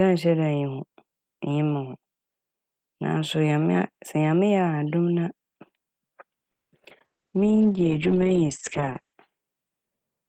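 Call audio freeze, 6.51 to 6.74 s: the speech stops dead for about 210 ms of silence, then resumes exactly where it left off, so nothing is lost but everything after arrives that much later. The likely cause is packets stalling in transit until the jitter buffer ran dry. Here the gap was filled with silence, and playback picked up again once delivery caught up.

Short concealed packet loss follows in a quick cluster at 6.84 to 6.87 s, 6.89 to 6.92 s and 6.98 to 7.02 s. Each time about 20 ms of speech failed to reach the decoder in time. The receiver patched each hole by stretching the preceding sound forward before fading back into the real signal. The result is a rapid run of small smears or wobbles.

Call bitrate drop, 7.06 to 9.21 s: the encoder's target fell from 32 to 9 kbps and stayed at the floor for about 2.05 s. That reflects the call's bandwidth estimate collapsing right after the disruption. 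With so few bits, Opus coded the speech coarsely and narrowed the band from about 20 kHz to 8 kHz. The voice turns dull, muffled and rough until the rate recovers.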